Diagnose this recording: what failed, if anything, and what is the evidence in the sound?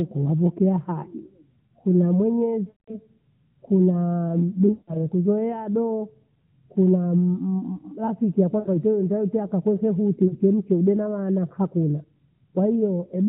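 The fault sits in the network: lost AMR speech frames on the radio link. Speech smears and fades toward silence at 2.68–2.98 s and 4.72–5.06 s, with shorter dips at 8.60–8.69 s and 10.28–10.36 s, as the decoder reuses its last good pitch and vocal-tract settings at falling gain.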